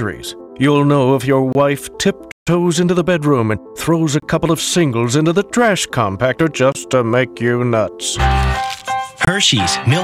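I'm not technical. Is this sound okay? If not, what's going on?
No. There are two kinds of fault.

Gap between chunks, at 1.53, 4.2, 6.72 and 9.25 seconds: the audio was delivered in pieces about 2.5 seconds long, and a short silence of about 25 milliseconds sits at each join. Nothing is missing. The sound just breaks off and picks up again. Because the pieces are the same size, these tiny holes come at a steady rhythm.

Playback stall, from 2.31 to 2.48 seconds: the sound stops in mid-flow for about 0.15 seconds, a longer and more noticeable silence than the small gaps, and then carries on. The likely cause is that the player ran short of data or was briefly held up by something else, so it had nothing to play until it caught up.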